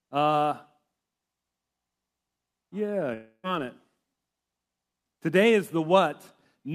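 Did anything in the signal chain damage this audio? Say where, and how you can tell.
Yes, at the network stage. From 3.13 to 3.46 s the speech decays into a fading buzz or hiss, then 70 ms of silence, and 300 ms is lost. This is likely a long network dropout.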